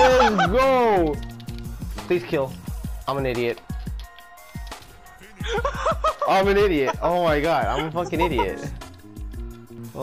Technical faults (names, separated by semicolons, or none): channel delay (comb filtering)